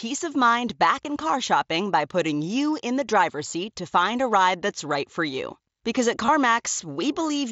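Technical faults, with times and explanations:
1.03 s and 6.26–6.28 s, concealed Bluetooth headset packet loss: about 15 ms is lost between "of mind back" and "in car shopping by", and 22.5 ms later on. The receiver fills each gap by repeating the closest-matching recent stretch of waveform, so each short run sounds like a buzzy tone held at full level, with a small warble where real audio returns.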